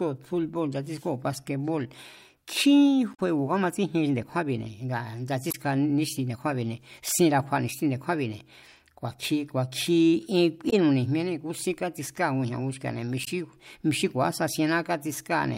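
At 3.13, 5.50, 10.69 and 13.23 s, damaged data in the compressed stream makes the decoder lose frame sync, giving 40 to 65 ms glitches.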